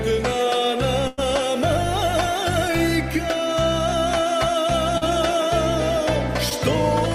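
A burst of packet loss at 1.07 to 1.20 s removes about 100 ms of audio. The receiver bridges it by extending the last sound and letting it fade, so a held buzz or fading hiss stands in for the missing stretch, and playback resumes further on without any silence. Short concealed packet loss follows at 4.98 to 5.03 s, where about 40 ms went missing, and again at 6.49 to 6.53 s, where about 20 ms is gone. Each hole is patched by continuing the preceding sound and blending back, leaving a brief smear or wobble.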